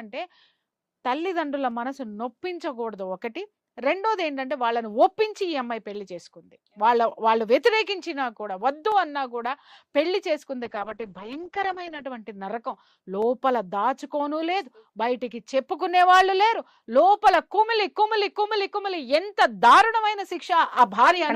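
Dropped samples at 1.71 s and 8.92 s produce single sharp clicks. Each likely comes from a fraction of a millisecond of the stream going missing, so the waveform jumps abruptly to a later value. Nothing audible is lost, but the discontinuity snaps through as a brief tick.

A call bitrate drop runs from 10.67 s to 12.11 s. The encoder's rate falls from 64 kbps to 8 kbps and stays at the bottom for about 1.4 s. Coarser coding turns the sound rough and watery, and the band narrows from 20 kHz to 8 kHz, so it also goes muffled until the rate recovers.

Further dropped-sample clicks follow at 11.33 s, inside the low-bitrate stretch, then at 13.22 s and 20.79 s. Each is the same thin, instantaneous tick.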